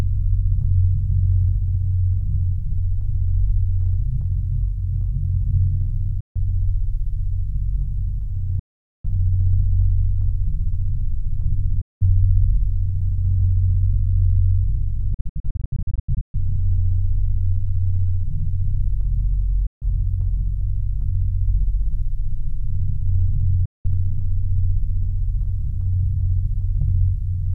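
Six gaps break up the audio, at 6.20, 8.59, 11.81, 15.14 to 16.36, 19.66 and 23.65 s, with the sound cutting abruptly to silence for about 0.15, 0.45, 0.19, 0.68 and 0.15 and 0.19 s. The fourth is a cluster of short holes, the longest 0.13 s. Each time the sound resumes further on, as if it had kept playing, pointing to a likely Bluetooth dropout, with audio packets arriving too late to play and being discarded.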